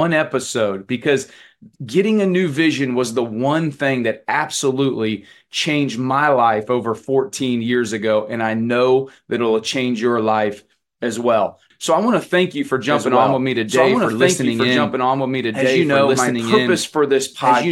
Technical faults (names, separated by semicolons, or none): doubled audio track